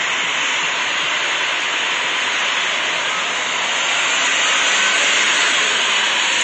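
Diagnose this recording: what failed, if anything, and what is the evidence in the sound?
The failure sits at the codec stage. Throughout the clip, nothing reaches above 9.5 kHz, so the top end sounds dull and closed in. The codec damage is plainly audible. Sustained sounds have a smeared, warbling edge. The likely cause is AAC compression, in its AAC-LC form, at a low rate that fits about 32 kbps. With so few bits, the encoder drops the highest bands outright and quantises the remaining frequency lines coarsely, which leaves this fizzy, swirling texture.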